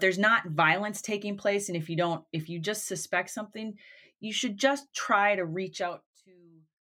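From 5.76 to 6.2 s, just after "should just try to", a rapid ticking rides on the speech as it fades by roughly 25 dB. This is zipper noise: the gain drops in unsmoothed 1 dB steps, around fifty per second, and each step clicks.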